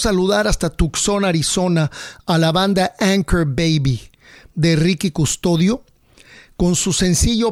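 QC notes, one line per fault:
Nothing stood out on listening to the speech.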